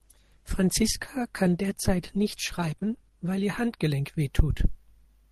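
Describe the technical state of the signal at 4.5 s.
At 4.5 s the speech signal is intact, with no dropout, clipping, distortion or other technical fault at that moment.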